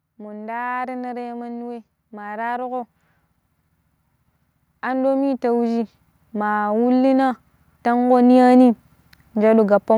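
Automatic gain rising occurs three times: from 1.97 to 2.96 s after "ta mandi wei", by about 4 dB; from 4.82 to 6.62 s, by about 6 dB; and from 7.83 to 8.69 s, by about 4 dB. Each time the gain control judged the input too quiet and lifted its level gradually, so the voice and background noise swell together.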